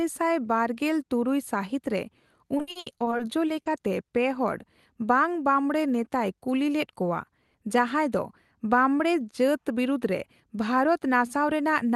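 Speech over a call link, with the top end stopping at about 12 kHz, as you'd expect from an Opus-style codec path. From 2.57 to 3.68 s there's repeated packet loss, and it gives that robotic sound: about ten dropouts in quick succession, the longest around 70 ms. Each hole gets papered over by stretching the last bit of audio, so roughly 310 ms of that stretch is concealment, and about 220 ms of real sound is simply gone. That's why it comes out choppy and robotic. Then from 9.06 to 9.59 s you get a jitter buffer speed-up. The receiver had built up more delay than it wanted, so it snipped out short pitch-period-sized chunks, something like 50 ms in total. That makes the audio run at about 109% speed with the pitch unchanged, so it sounds briefly hurried.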